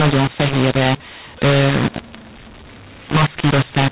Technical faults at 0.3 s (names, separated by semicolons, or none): mu-law and A-law mixed up